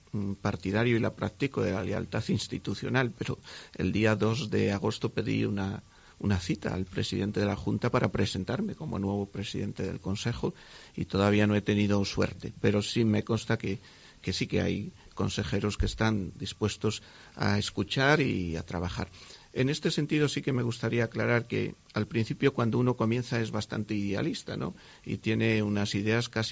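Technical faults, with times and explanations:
Nothing stood out as a technical fault on listening.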